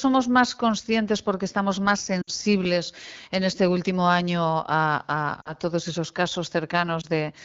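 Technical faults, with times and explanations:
2.22 to 2.31 s, lost AMR speech frames: right after "conscientes porque estamos más" about 60 ms of speech goes missing, which fits three 20 ms frames. The decoder repeats the last good pitch and vocal tract settings at falling gain, so the sound fades to near silence within two frames against the clear 12.65 kbit/s wideband audio, rather than clicking as a plain dropout would.
5.41 to 5.53 s, lost AMR speech frames: about 40 ms, which fits two frames, concealed just before "todos esos". It fades to near silence, and the sound returns briefly rough.
7.01 to 7.06 s, lost AMR speech frame: a single 20 ms frame is replaced, giving only a brief dip or warble with no gap.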